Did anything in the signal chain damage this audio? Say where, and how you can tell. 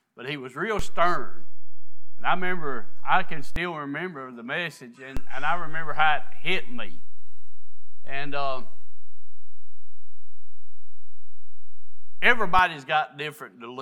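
Yes, a DC step, twice, at the converter or input stage. The zero line jumps by about -16 dBFS at 0.79 s and returns at 3.56 s, then again from 5.17 to 12.59 s. Each edge thumps while the sound carries on unchanged.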